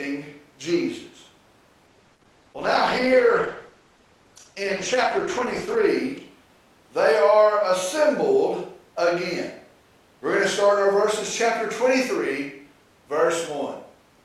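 From 1.87 to 5.87 s, the speech drops abruptly to an adaptive stream at a lower bitrate, sounding like a fall from about 64 to about 12 kbit/s Opus. Codec artefacts rise, with no gap.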